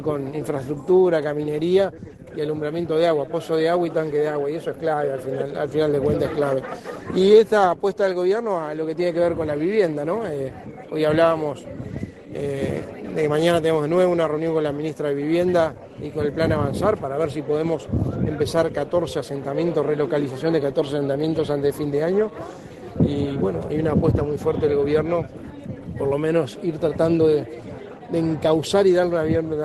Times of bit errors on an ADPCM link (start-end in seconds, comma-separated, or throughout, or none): none